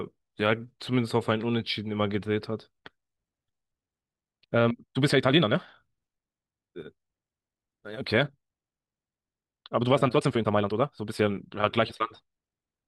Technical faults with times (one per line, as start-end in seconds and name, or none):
4.18-12.88 time-stretched section